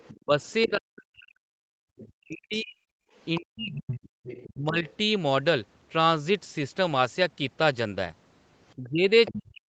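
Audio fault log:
0.0–0.67 s, 1.97–2.01 s, 3.16–4.93 s, 8.7 s to end: other side's voice leaking through, a second voice about 15 dB under the talker (the 1.97 s scrap about 30 dB under), likely residual loudspeaker echo the canceller missed.
0.13–4.85 s, 8.77 s to end: speech suppressed in double talk. The talker's voice dips by up to about 40 dB, roughly 3 s in total in the first span, likely from the canceller attenuating both voices during overlap.
3.06–3.11 s: background gated by the echo canceller. The room sound drops by about 16 dB for 50 ms as the canceller clamps the microphone, then recovers.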